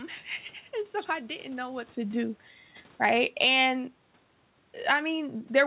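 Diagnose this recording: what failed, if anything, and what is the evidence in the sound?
Call processing: automatic gain falling between 2.90 and 3.59 s. The gain control judged the input too loud or its background noise too strong, and eased its gain down by about 5 dB.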